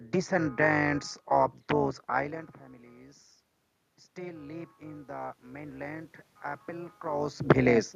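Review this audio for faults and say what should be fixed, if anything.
Overlap-add ripple runs through the whole clip. The level swings by about 11 dB at a rate of around 200 Hz, giving the speech a metallic buzz with extra tones around each note. The analysis/resynthesis stage is adding windowed frames back together with an overlap whose windows do not sum to a constant, so gain peaks and dips once per frame. To prevent it, pair the window shape and hop size so the overlapped windows sum flat, for example Hann at 50% overlap.

Automatic gain rising can be heard from 4.15 to 6.08 s. Voice and room noise swell together by about 6 dB over those two seconds. This follows a drop in input level of about 18 dB, which the AGC treats as a quiet source and slowly compensates for. The level changes near 2 and 7 s come from the talker moving relative to the microphone, not from the AGC. To prevent the 4.15–6.08 s swell, lengthen the AGC release time or cap its maximum gain so short input drops are not chased.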